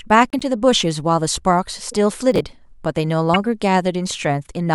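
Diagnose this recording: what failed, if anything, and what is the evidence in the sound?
Squeaky blips at 0.30–0.42 s, 1.85–1.94 s and 3.33–3.36 s point to corrupt frames decoded in the codec, with flipped bits misplacing energy across a few frames.

Gritty crackle from 2.32 to 2.53 s is processor overload crackle at the driver and buffer stage: repeatedly missed buffers of around 10 ms were skipped, leaving hard-edged gaps.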